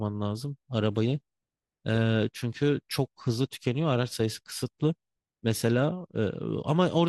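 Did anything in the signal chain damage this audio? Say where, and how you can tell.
No, nothing in the signal chain damaged this speech recording. There is no audible sign that any stage between capture and playback altered the sound.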